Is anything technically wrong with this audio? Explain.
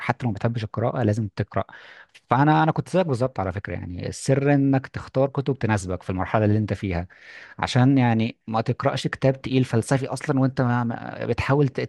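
No, nothing technically wrong can be heard in this speech recording. There is nothing here that calls for a fix.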